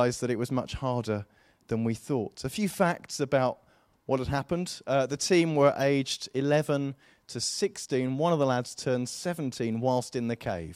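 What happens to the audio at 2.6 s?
A corrupt frame decoded between 2.55 and 2.61 s, just before "facts about what had", is what happens there. For those 56 ms, roughly two damaged compressed frames were played without being caught, so the decoder applied misread gains and codes and placed energy in the wrong frequency bands. The result is a short, fairly quiet glitch, a chirp, squeak, blip or burst of noise, peaking around -30 dBFS at that point.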